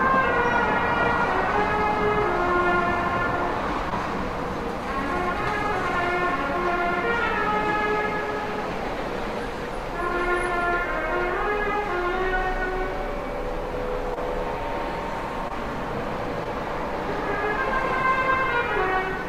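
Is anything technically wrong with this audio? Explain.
Yes. Four brief smears or wobbles interrupt the sound, at 3.90 to 3.93 s, 14.14 to 14.18 s, 15.48 to 15.52 s and 16.44 to 16.47 s. This is short concealed packet loss: about 20 ms of audio arrived too late, so the receiver extended the preceding sound to bridge each gap and then blended back in.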